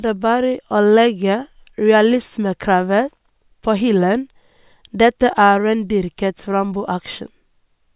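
No technical faults can be heard anywhere in this speech recording. There is nothing in it that needs a timestamp or closer attention.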